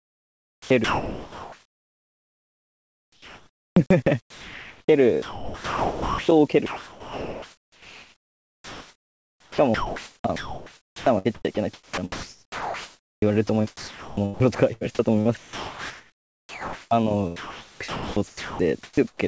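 Right from the start, 0.0 to 3.76 s, the speech is chopped by the voice detector. The sender most likely kept gating itself on and off, so about 3.6 s of that stretch is comfort noise spliced between real fragments. Syllables and word edges keep vanishing.

Then come two spots where sound is dropped by the voice detector: 4.20 to 4.88 s and 5.22 to 6.28 s. In each, quiet speech was likely taken for background and transmission simply stopped. About 0.4 s and then about 0.85 s of actual speech go missing, and steady noise fills the gap (0.68 s and 1.06 s) until the detector fires again.

The chopping returns for 6.66 to 14.83 s, with roughly 6.3 s replaced, and again for 15.21 to 16.91 s (about 1.6 s) and 17.36 to 19.19 s (about 1.3 s). It has the same stuttering edges throughout. Underneath it all, the call path's band stops at 8 kHz, which fits a wideband codec like G.722 at 64 kbps.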